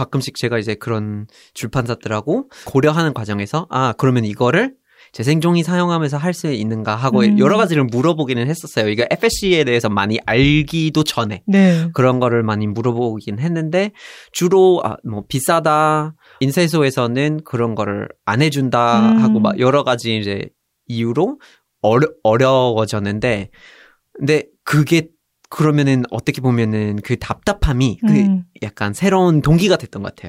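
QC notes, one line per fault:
Nothing to flag: no audible technical faults anywhere in the speech.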